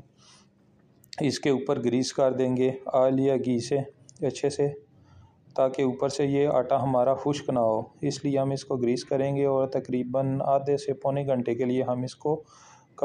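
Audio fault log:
No fault to log.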